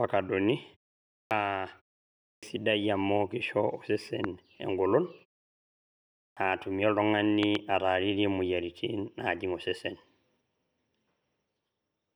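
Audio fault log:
1.19 s, 2.29 s and 6.23 s: clipped start after a pause. Each time, the sound returns out of silence without its first part. About 0.12 s is lost at 1.19 s and about 0.14 s at the other two. The pauses before them last 0.51, 0.56 and 1.06 s. The output device seems to drop into sleep during these gaps and needs time to wake and lock before it passes audio again, so each onset begins abruptly.
4.24–4.26 s and 7.43–7.57 s: loud pop. A single sharp pop comes first, then a pair of pops in quick succession. Each peaks about 15 dB above the surrounding sound, and the audio carries on underneath. The likely cause is a sudden voltage step or pulse, such as a plug, switch, static discharge or driver glitch, which the downstream circuits shape into a brief thump.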